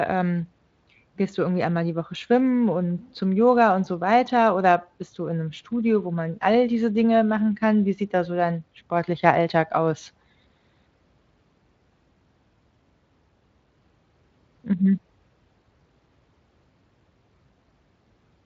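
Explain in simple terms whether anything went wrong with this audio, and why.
Nothing went wrong with this audio: the Speex speech codec it passed through is working as it should, and nothing in the recording points to a fault.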